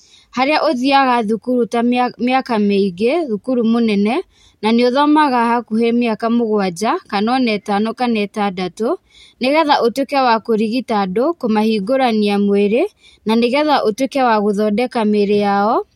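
No technical faults can be heard anywhere in the speech; the signal stays continuous and steady in level throughout.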